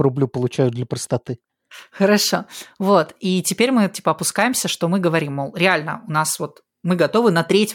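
No technical faults can be heard anywhere in the speech recording, and the signal stays steady and intact throughout.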